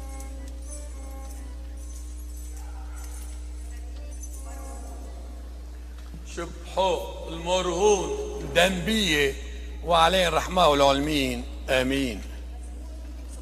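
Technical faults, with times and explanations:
Throughout, mains hum: a steady 60 Hz tone with some low harmonics sits only about 10 dB under the sound, likely from a ground loop or nearby transformer. Unlike rumble, its pitch never wavers, and unlike buzz it lacks a bright, raspy edge.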